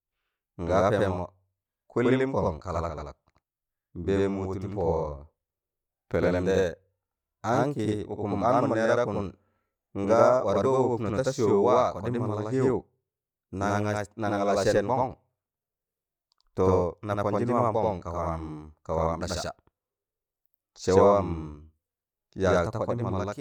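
Throughout the speech, channel delay (doubling): one channel lags 85 ms, fitting a 4096-sample buffer, giving a single equal-level slap rather than decaying reverb.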